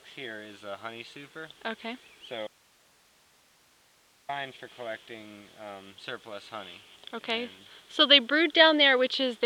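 At 2.47 s the sound cuts out abruptly in an audio dropout to a faint residue. For 1.82 s, until 4.29 s, only hiss remains, roughly 35 dB below the signal. The signal was likely lost upstream while the path after the break stayed live.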